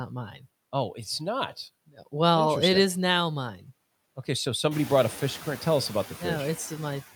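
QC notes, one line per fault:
Throughout: noise suppressor artifacts. The suppressor cuts bands it judges steady noise by about 17 dB between words, letting room noise swell back under speech, especially after it rises around 4.5 s.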